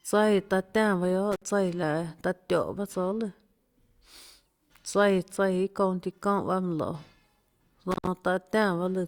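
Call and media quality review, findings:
Intermittent contact in speech path, two dropouts. 1.32–1.46 s, line open about 57 ms. 7.91–8.07 s, open about 111 ms. Crackle at both edges, faint hiss in the gaps. Probable component: loose cable or plug. Connection briefly breaks, then remakes.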